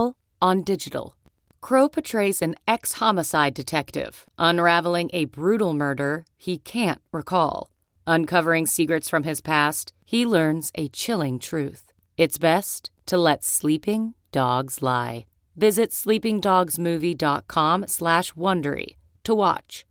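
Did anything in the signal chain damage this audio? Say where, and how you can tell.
No, nothing in the chain has damaged this speech; it carries the signature of Opus voice compression in hybrid mode with full bandwidth kept, which fits a setting around 24 kbps with 20 ms frames, and the codec has left only light marks on the sound.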